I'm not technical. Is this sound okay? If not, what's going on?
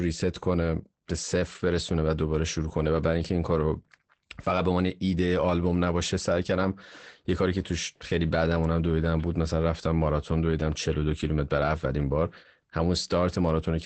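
No. Throughout the recording, the speech sounds muffled and a little hoarse, with a faintly robotic edge, and the crisp high sounds that give speech its clarity are missing. This is Opus voice compression at a low setting. To make the file small, the coder keeps only a simplified sketch of the voice, rebuilt in short slices, and discards everything above about 8.6 kHz. Those coarse approximations and the lost treble cause the dull, rough sound.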